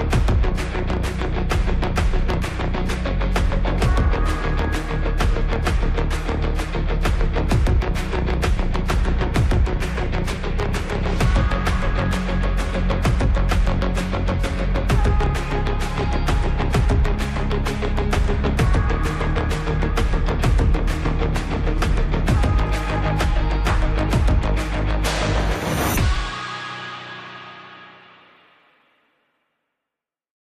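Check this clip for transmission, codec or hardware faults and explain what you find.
No transmission, codec or hardware problems turn up anywhere in the recording, and the signal holds steady without any audible disturbance.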